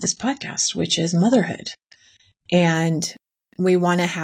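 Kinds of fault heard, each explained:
Adaptive stream starting at a low bitrate: the player began on a cheap version of the stream to start quickly, then switched up once it had gauged the connection. From the start to 2.74 s the speech has nothing above about 8.8 kHz and heavier codec smearing, which points to roughly a 24 kbit/s AAC encode; then the full treble returns abruptly with no gap. Quality improving at the very start sets it apart from a mid-stream downgrade or a permanently low-bitrate file.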